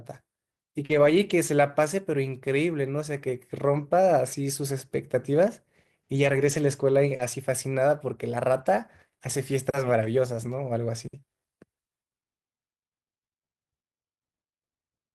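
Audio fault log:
0.85–0.91 s and 7.15–7.21 s, short concealed packet loss: a brief smear or wobble where 40 ms of audio arrived too late, and the decoder bridged the gap by extending the preceding sound.
0.89–1.31 s, 3.73–3.83 s, 6.15–6.53 s, 7.19–7.25 s, 8.53–8.63 s and 10.01–10.07 s, lost packet rebuilt from error correction: rougher, noisier stretches of 40 to 220 ms, played from low-bitrate backup copies carried in the following packets.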